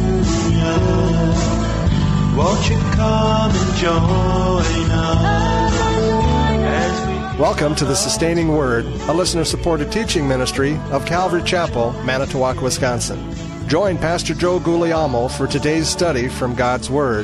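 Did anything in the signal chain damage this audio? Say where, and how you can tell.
No, nothing in the signal chain damaged this audio, and no stage shows any sign of it.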